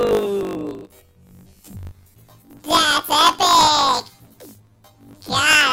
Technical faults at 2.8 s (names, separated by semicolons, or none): planar audio read as interleaved